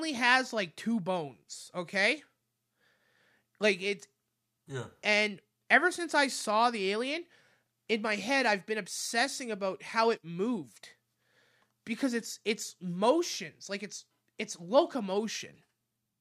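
No faults detected in the speech recording.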